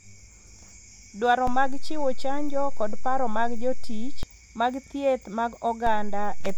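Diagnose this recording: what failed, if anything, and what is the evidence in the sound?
The converter stage threw a DC step. The waveform's zero line jumps by about −19 dBFS at 1.47 s and returns at 4.23 s, then jumps by about −20 dBFS at 5.87 s and holds to the end. Each shift lands as a low thump while the speech runs on untouched, consistent with an offset input being switched in.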